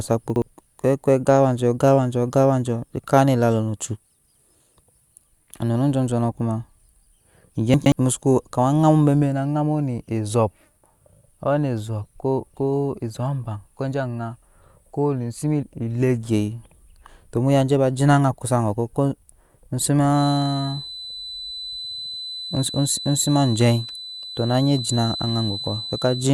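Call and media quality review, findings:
Chunks out of order, 0.3–0.42 s and 7.74–7.92 s: 60 ms blocks replayed one, then two, positions late. The speech is jumbled, but nothing is missing, unlike a dropout.

Feedback whistle from 20.09 s to end: steady 4 kHz tone, well below the speech, swelling and fading slowly without building. Likely a speaker-to-mic acoustic loop near its gain limit. It is a single high pitch, not mains hum.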